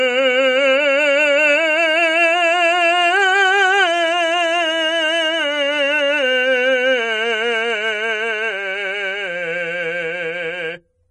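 From start to finish the music sounds watery and swirly, with plainly audible damage: nothing survives above 10.6 kHz, so the top end is dull, and faint detail flickers in and out while attacks smear. This is likely MP3 compression at a very low bitrate, something around 37 kbps, where the encoder runs short of bits, cuts the treble at a fixed point and drops weak frequency lines that then switch on and off from frame to frame.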